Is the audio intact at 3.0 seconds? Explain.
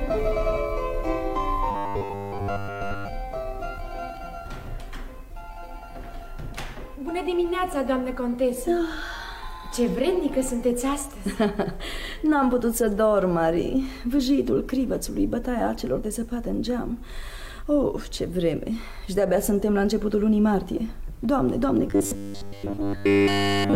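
No. At 3.0 seconds the sound is inside a stretch of robotic sound from repeated short buffers, running from 1.71 to 3.08 s. The likely cause is new audio arriving too seldom, so the playback repeats a short chunk, here about 10 ms, and skips most of the real material. That repetition imposes a rigid 100 Hz metallic buzz. On a spectrogram it shows as evenly spaced horizontal bands every 100 Hz; the waveform shows identical 10 ms cycles.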